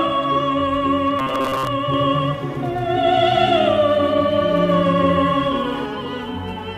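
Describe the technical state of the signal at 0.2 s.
At 0.2 s the signal is intact, with no audible fault at that moment.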